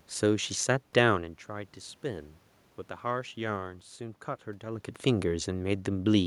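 No system faults in this speech recording: the steady background is the room's own noise, and the level shifts near 1 s and around 4.5 s are the talker moving relative to the microphone.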